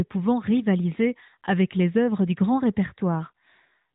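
No technical faults are audible anywhere in this speech.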